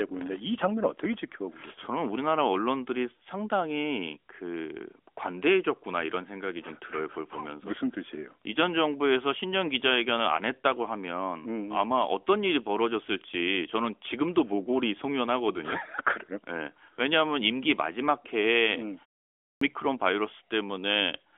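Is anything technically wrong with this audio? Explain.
Yes. At 19.28 s there is a clipped start after a pause: after a 0.31 s silence, the output device wakes late, so about 0.33 s of speech onset is lost and it begins abruptly. The audio is narrowband, with nothing above about 3.7 kHz, as expected from an AMR narrowband mobile codec.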